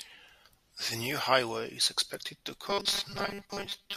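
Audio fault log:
2.70–3.96 s, robotic sound from repeated short buffers: the speech turns into a stiff metallic buzz at 200 Hz that still loosely tracks the words. That's likely a tiny chunk of about 5 ms being looped while roughly half the real audio gets skipped.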